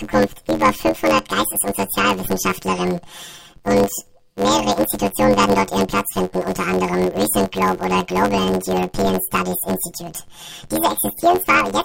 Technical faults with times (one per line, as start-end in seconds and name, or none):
0.00-11.84 planar audio read as interleaved